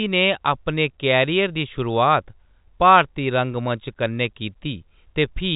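Nothing stood out on listening to the speech, which comes across with the narrow band of an ordinary G.711 telephone line.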